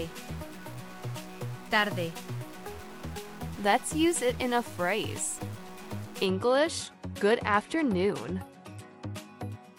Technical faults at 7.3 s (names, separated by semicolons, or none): Bluetooth SBC bit pool drop